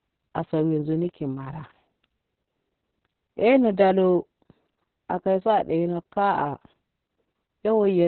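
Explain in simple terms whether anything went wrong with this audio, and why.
Yes, the whole clip, from start to finish, suffers from Opus voice compression squeezed very hard. The speech sounds muffled because nothing above about 4.3 kHz survives, and it also sounds hoarse and slightly robotic, with a rough, grainy buzz on the voice. That grain is what separates it from a simple treble cut or muffling filter, which would dull the sound but leave it smooth. Here, the coder has too little room to describe the voice faithfully.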